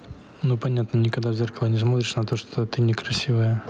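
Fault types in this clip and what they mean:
Gain pumping: throughout the speech, the level is pulled down on loud sounds, with a level swing of around ten decibels, leaving loud and soft parts squashed closer together. This is likely excessive input gain being pulled down hard by a fast limiter or compressor.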